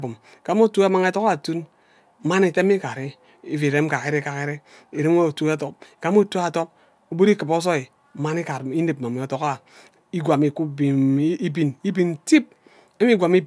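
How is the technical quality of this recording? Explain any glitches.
No audible glitches or faults.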